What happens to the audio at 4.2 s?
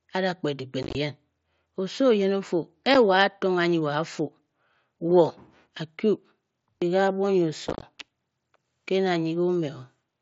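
Nothing goes wrong at 4.2 s: the speech there carries through the Bluetooth mSBC headset path intact, with no dropout, click or distortion at that moment.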